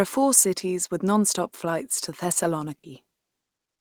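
A speech clip in which, from 2.77 to 2.85 s, the sound briefly smears into a held, fading tail before jumping ahead, leaving a small hole in the flow. This is a burst of packet loss: consecutive packets carrying about 60 ms of audio were lost or arrived too late to play. The receiver covered the gap by extending the last sound it had and turning it down, then resumed with that 60 ms of material gone.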